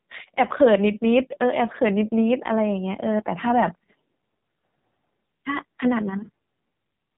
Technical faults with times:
0.00-7.17 AMR narrowband mobile codec

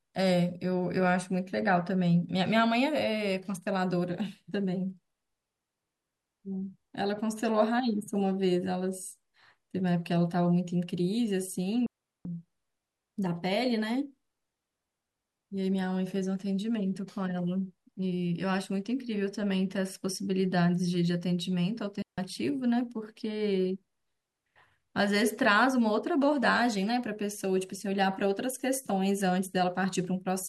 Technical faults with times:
11.86-12.25 digital wireless dropout
22.02-22.18 digital wireless dropout

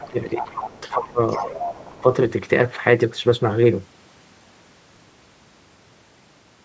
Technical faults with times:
0.00-1.03 other side's voice leaking through
0.09-1.56 speech suppressed in double talk
1.28-2.02 other side's voice leaking through

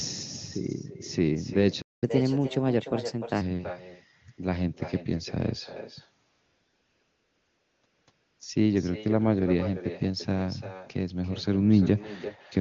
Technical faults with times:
0.00-12.61 echo with no canceller
1.81-2.04 playback stall
2.04-3.41 catch-up at higher speed
6.29-8.39 AMR comfort noise

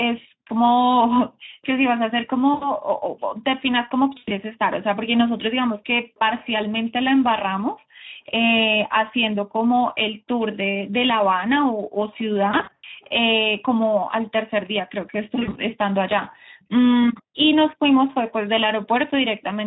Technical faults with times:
0.00-19.67 Speex codec
2.53-2.72 VoIP packet loss concealed by the speech codec
4.17-4.33 VoIP packet loss concealed by the speech codec
12.51-12.85 VoIP packet loss concealed by the speech codec
15.35-15.59 VoIP packet loss concealed by the speech codec

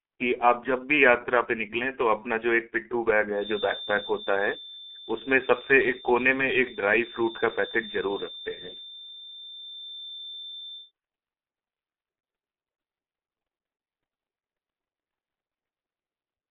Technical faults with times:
0.00-16.50 G.723.1 codec
3.30-10.92 feedback whistle

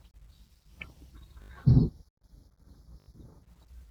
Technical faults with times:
1.42-1.50 repeated buffer
1.65-3.43 channel delay (comb filtering)
3.00-3.08 repeated buffer

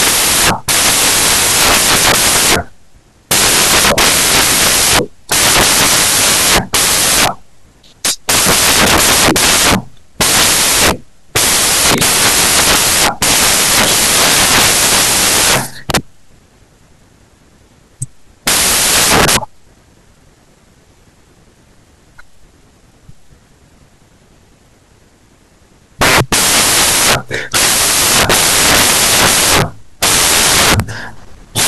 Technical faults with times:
0.00-31.68 samples built from the wrong bytes

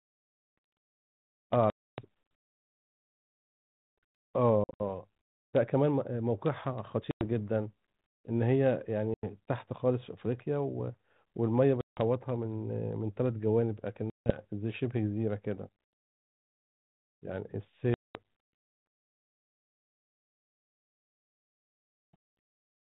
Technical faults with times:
1.70-2.01 packet loss on an ADPCM call
4.64-4.81 packet loss on an ADPCM call
7.11-7.26 packet loss on an ADPCM call
9.14-9.24 packet loss on an ADPCM call
11.81-12.00 packet loss on an ADPCM call
14.10-14.41 packet loss on an ADPCM call
17.94-18.18 packet loss on an ADPCM call

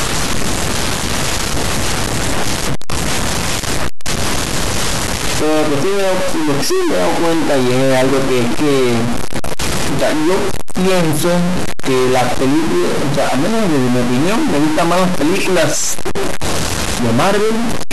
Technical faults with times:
0.00-17.93 stuck bit

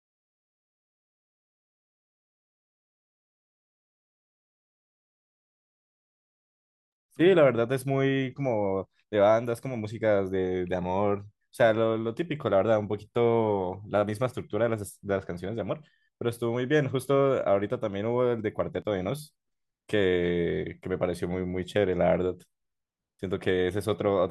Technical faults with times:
8.84 audio missing between chunks
18.82 audio missing between chunks

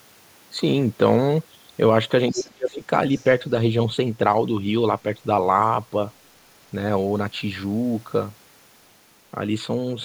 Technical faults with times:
2.31-2.48 other side's voice leaking through
2.32-2.90 speech suppressed in double talk
3.17-3.29 other side's voice leaking through

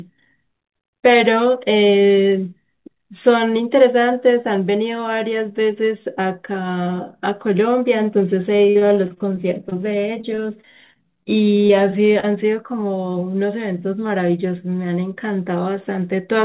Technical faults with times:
8.56-9.73 repeated packet loss (robotic sound)
10.21-11.27 repeated packet loss (robotic sound)
11.67-11.71 short concealed packet loss
12.20-12.25 short concealed packet loss

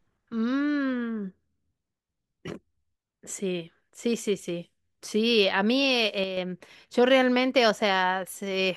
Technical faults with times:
6.24-6.37 one channel drops out

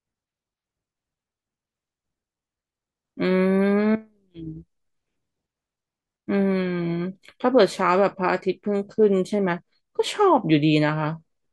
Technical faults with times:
none

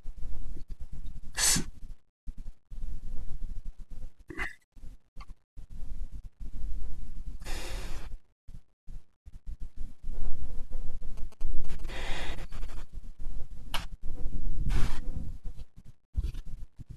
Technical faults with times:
11.17-11.90 GSM signalling bursts

